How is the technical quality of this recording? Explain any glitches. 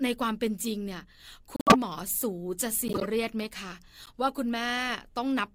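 The recording has three glitches from corrupt frames decoded. They fall at 1.56–1.76 s, 2.86–3.05 s and 4.03–4.09 s. In each, damaged bits in the compressed stream were decoded as if valid, so misread gains and codes put energy at the wrong frequencies for a handful of frames. This is heard as a chirpy burst over the speech. The first is loud, the second moderate, and the last, spanning only a couple of frames, is a faint blip.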